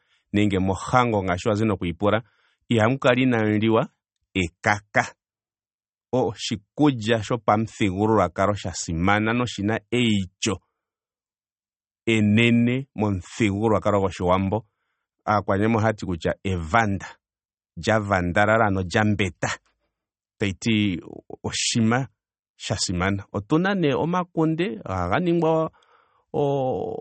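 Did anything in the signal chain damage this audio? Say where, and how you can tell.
Yes, at the codec stage, throughout the speech. The whole recording has a plainly audible watery, swirling texture, and nothing survives above 8.4 kHz, so sibilants sound dull and metallic. This is likely MP3 compression at a low bitrate, which fits something around 32 kbps. Short of bits, the encoder cut the treble at that fixed frequency and dropped quieter spectral lines, which flicker in and out from frame to frame and produce the swirl.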